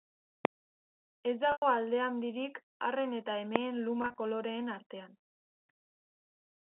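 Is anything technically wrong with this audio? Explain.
Yes. There are two kinds of fault.

Invalid numbers at full scale: at 0.45 s and again at 3.56 s, just after "alde handirik arren eta", a calculation produced invalid values that were pinned to full scale for a block of about 0.67 ms. Because the block is so short, each one is heard as a single sharp bang.

Packet loss with pitch repetition: from 1.52 to 1.62 s, just before "alde handirik arren eta", about 100 ms of audio was lost. The receiver repeated the last pitch period and faded it out, so the sound dies into silence and then cross-fades back in. From 4.02 to 4.18 s, another 100 ms was lost in scattered gaps, the longest about 40 ms. Those short gaps come out as slightly held, buzzy stretches. Each loss fits roughly five 20 ms packets.

All of this sits on a telephone-band signal, as expected from G.711 coding.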